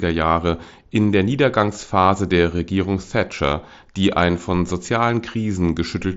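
The speech comes through a Bluetooth mSBC headset link working as intended, with its usual wideband ceiling around 8 kHz, and no technical faults can be heard at any point.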